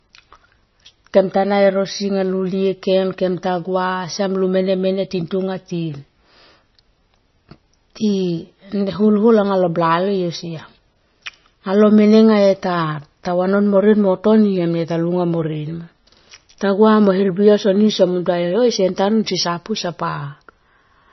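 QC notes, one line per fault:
throughout: likely MP3 compression. Nothing sounds above 5.9 kHz. The speech is watery and swirly as weak detail flickers. It fits about 26 kbps.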